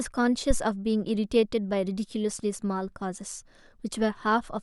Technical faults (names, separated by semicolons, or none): phantom power thump